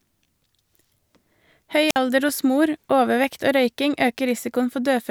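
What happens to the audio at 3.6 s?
Nothing goes wrong at 3.6 s; the speech plays through that moment intact, with no dropout, click or distortion.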